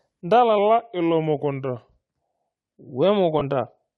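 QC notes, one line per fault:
throughout: Bluetooth LC3 compression. The speech carries a plainly audible grainy, breathy edge, likely from LC3 coding at around 48 kbps with 7.5 ms frames. At that rate the encoder discards much of the fine upper-band detail and replaces it with shaped noise, so consonants and vowel tops sound fizzy rather than crisp. On a spectrogram the high band looks mottled and smeared in short blocks instead of showing clean harmonic striations.
0.58 to 1.98 s: drift correction step. For about 1.4 s the speech slows by roughly 6.4% and drops about 115 cents, just over a semitone, then snaps back to normal speed and pitch at 1.98 s. This is likely a clock-matching stage changing the playback rate in one jump to rebalance its buffer. On a spectrogram the harmonics step down abruptly at 0.58 s and jump back up at 1.98 s, with waveform features visibly stretched in between.
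3.39 s: lost LE Audio frames. About 15 ms of sound, which fits two 7.5 ms frames, is replaced by the decoder's concealment, which repeats the previous spectrum with randomised phase. The result is a brief noisy smear where the speech loses its pitch structure for an instant. On a spectrogram the harmonics blur into a short noisy patch, and the waveform shows a small stretch of irregular, noise-like texture.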